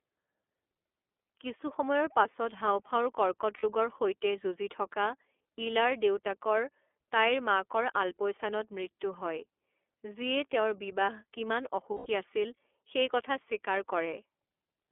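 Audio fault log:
throughout: iLBC codec. The speech is confined to a telephone band of roughly 300 Hz to 3.4 kHz, with nothing above about 4 kHz, so it sounds thin and boxed-in. Each 30 ms frame's excitation is coded on its own at a rate consistent with 13.33 kbps. The coding damage is plainly audible as a rough, slightly synthetic texture, where the waveform is approximated frame by frame rather than carried through faithfully.
3.57 to 3.64 s, 11.94 to 12.07 s: lost iLBC frames. Two gaps of missing packets, about 60 ms and then 120 ms, which matches two and four 30 ms frames. The decoder fills each gap by repeating the last pitch period with added noise, so it is heard as a brief held, buzzy, breathy vowel. The longer gap fades before it ends. Since every frame decodes independently, the speech returns cleanly right after each gap.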